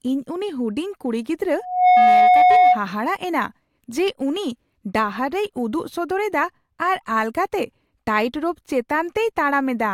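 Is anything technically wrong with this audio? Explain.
Yes, there's a loudspeaker feedback squeal from 1.59 to 2.82 s: the mic catches its own speaker, and a 728 Hz tone swells in about a third of a second to roughly 10 dB over the speech.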